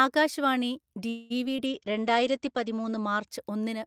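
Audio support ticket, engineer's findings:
Call audio freeze, 1.09–1.32 s, right after "ആകാശ് വാണി". Likely network delay drained the jitter buffer, so the receiver stretched the last sound into a fading buzz or hiss. About 0.21 s inserted, nothing lost, and playout stays that much later afterward.

Short concealed packet loss at 1.44–1.47 s and 1.57–1.60 s. Roughly 20 ms missed the decoder each time. Concealment extrapolated the preceding sound, then cross-faded back, leaving two brief smears in quick succession.

Call bitrate drop, 1.67–3.34 s. The bandwidth estimate fell and the Opus encoder coarsened, fitting a cut from about 48 kbps to about 13 kbps, with the floor held for 1.34 s. The top end narrows from 20 kHz to 8 kHz, leaving a muffled, rougher sound until recovery.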